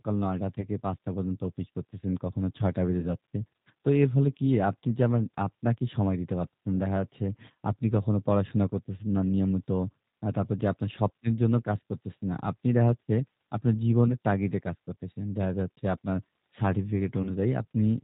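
Speech, coded throughout with the G.729 codec at 8 kbit/s. Nothing above 4 kHz survives, and the voice sounds plainly rough and synthetic. VoIP packet loss concealed by the speech codec occurs at 0.61–0.66 s, 3.00–3.12 s, 14.08–14.12 s and 17.23–17.33 s. The decoder stretches the last sound into a fading buzzy tone or coloured noise, which fits dropouts of 10 to 30 ms.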